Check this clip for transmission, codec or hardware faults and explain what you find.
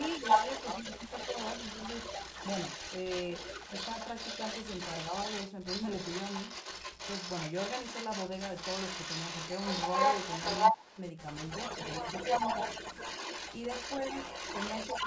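Two faults are audible in the speech: echo leak and speech suppressed in double talk.

Echo leak runs from 0.0 to 11.02 s and again from 11.26 s to the end. A delayed copy of the speech follows it, about 304 ms behind at first, then 325 ms. It starts a few dB below the direct sound and later matches it. The likely cause is a loudspeaker echo the far end's canceller failed to remove.

Speech suppressed in double talk occurs at 10.71 to 10.97 s and at 12.00 to 12.07 s. The speech dips sharply, by roughly 15 dB and then roughly 10 dB, while the echo overlaps it. The canceller likely mistook the talker for echo and turned both down. The band ending at 8 kHz is ordinary call processing.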